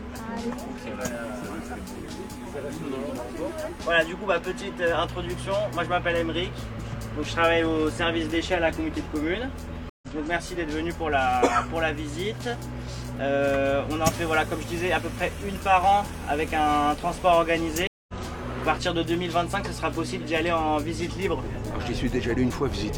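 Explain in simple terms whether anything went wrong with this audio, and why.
Two short dropouts give it away, and they're both the same problem: a stream reconnect. At 9.9 s the audio goes silent for 127 ms, and at 17.87 s for 213 ms. Each time the connection dropped and the player had to hook back in and start decoding afresh. Because the stream kept moving in the meantime, the sound picks up a little further on, skipping about a tenth of a second the first time and about a fifth the second.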